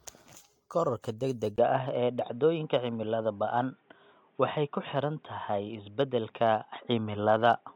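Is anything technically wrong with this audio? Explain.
Yes, there are two problems in this speech clip.

Generation loss runs through the whole clip. The speech was likely decoded and re-encoded with AAC around seven times, at settings pointing to roughly 96 kbit/s. Each pass requantises on a fresh frame grid, so errors accumulate into a swirly, hollow, smeared sound with blurred attacks and nothing above 19.4 kHz.

Input switched to a poorer device at 1.56 s and lasts to the end, likely a change to a narrower-band microphone or headset profile. After a 20 ms gap the speech turns dull and boxy, with nothing above 3.8 kHz. The level shifts by about 5 dB, and new background noise sits roughly 40 dB below the speech.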